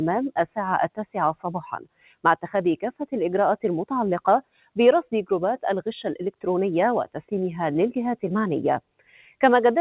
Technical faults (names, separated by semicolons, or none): noise suppressor applied to music or sounds; sound cut by the noise suppressor